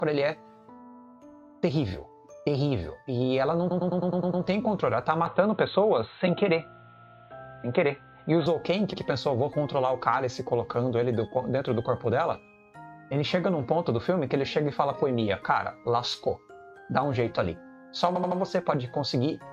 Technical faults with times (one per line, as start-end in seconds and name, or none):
3.70-4.43 repeated frames
5.26-8.46 input switched to a poorer device
8.92-9.00 repeated frames
18.14-18.38 repeated frames